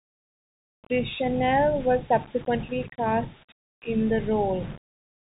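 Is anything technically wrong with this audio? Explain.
Yes. Two faults run through the whole speech clip.

The first is low bit depth without dither, likely the result of rounding to about 6 bits with no dither added. Since the rounding error tracks the signal instead of being randomised, quiet passages turn gritty and the softest moments crackle between two levels or cut to silence. The distortion sits roughly 25 dB below the speech. On a waveform, low-level stretches show coarse staircase steps. On a spectrogram, the grain appears as a haze that comes and goes with the speech rather than a steady noise floor.

The second is the Bluetooth CVSD headset codec, which sounds like a 64 kHz one-bit stream. Each bit only tells the decoder to step up or down, and the step size adapts as it goes. Nothing above 3.8 kHz survives, so the speech sounds narrow and boxy. Wherever the slope is steep, the stepping falls behind: s sounds go scratchy and a granular hiss runs underneath. 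The damage is plainly audible. On a spectrogram, the energy stops at a hard ceiling near 3.8 kHz.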